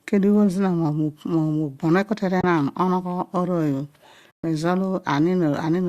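At 2.41–2.44 s and again at 4.31–4.44 s the speech drops into silence for 30 ms and 130 ms: AAC frame loss with muting, where the decoder, likely low-delay AAC, zeroes missing frames and overlapping windows fade the sound out and back. A spectrogram shows blank vertical bands with soft edges.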